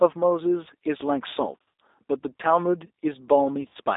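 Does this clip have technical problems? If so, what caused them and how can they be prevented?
Yes. G.729 codec damage runs through the whole clip. The speech is squeezed into a telephone band of about 300 Hz to 3.7 kHz, and the rough, slightly synthetic texture fits G.729A at 8 kbit/s, which rebuilds each 10 ms frame from a vocal tract filter, a pitch predictor and a few pulses rather than from the waveform itself. Using a wideband codec such as G.722 or Opus where the network allows would prevent it.

VoIP packet loss concealed by the speech codec occurs from 1.60 to 1.72 s and again from 3.61 to 3.77 s. In the first, about 150 ms of audio is missing, scattered over 200 ms, with the longest gap 60 ms. In the second, about 100 ms is missing over 140 ms, with the longest gap 40 ms. The decoder fills each gap by stretching its last pitch and filter into a fading buzzy tone or coloured noise, and the sound stays distorted briefly after packets resume. 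Adding jitter buffering, forward error correction or a more reliable network path would prevent it.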